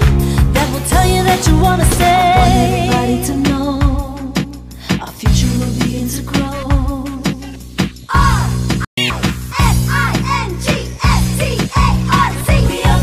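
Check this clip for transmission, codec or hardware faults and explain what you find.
Two connected playback faults occur near 9 seconds.

Playback stall, 8.85 to 8.97 s: the player likely ran short of data or was blocked, so the sound cuts out for about 128 ms.

Catch-up at higher speed, 8.97 to 9.10 s: the player resamples its backlog at double speed, so the sound briefly rushes, about ten semitones higher, before returning to normal.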